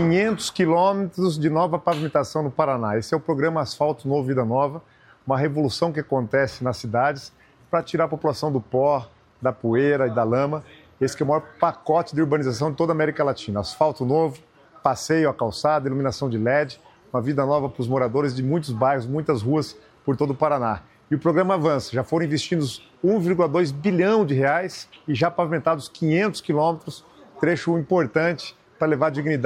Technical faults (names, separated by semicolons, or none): dropped samples